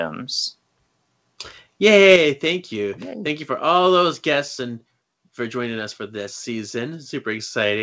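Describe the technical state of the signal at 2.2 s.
Right around there you're hearing the tail of a microphone overload, from 1.94 to 2.16 s. The peaks push about 3 dB past the converter's ceiling, so a small share of samples get their tops sheared flat, which gives that gritty, crackly edge. A too-hot input gain is the likely cause. Then at 2.16 s the level suddenly drops by about 7 dB, voice and background together, which sounds like the microphone volume being stepped down by the call software reacting to that clipping. Behind it all, the call path's band limit means nothing comes through above 8 kHz.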